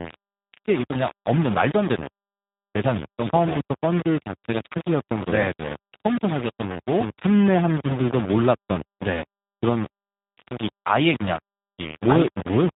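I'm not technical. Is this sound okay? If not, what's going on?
No. The speech was most likely stored with far too few steps of loudness, a problem called low bit depth without dither, so it sounds grainy and gritty throughout, especially quieter parts. It was also squeezed through the G.729 codec, a phone-call compressor that discards everything above 3.8 kHz, leaving the speech muffled, slightly rough and synthetic.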